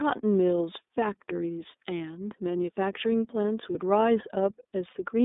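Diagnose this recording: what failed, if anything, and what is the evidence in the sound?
The codec stage is the culprit. The whole speech clip is squeezed into a narrowband line of about 250 Hz to 3.7 kHz and has a clearly rough, slightly synthetic edge. That's the iLBC codec at work, and the sound fits its 13.33 kbps mode with 30 ms frames.

There's also a network hiccup: lost iLBC frames around 3.72 to 3.76 s, a gap about one 30 ms frame long. The decoder papers over it by repeating the last pitch cycle with some noise, so you hear a brief buzzy held vowel. The speech is clean again right after, since each frame decodes independently.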